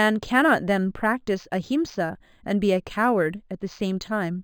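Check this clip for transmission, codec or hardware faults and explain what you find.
One fault here, and it runs through the whole clip: imaging from linear upsampling. The speech was brought up from 11 kHz to 44.1 kHz by joining samples with straight lines, a weak filter, so the top is dulled and a faint mirrored copy, roughly 30 dB down, sits from about 5.5 to 11 kHz, putting a light metallic shimmer on sibilants.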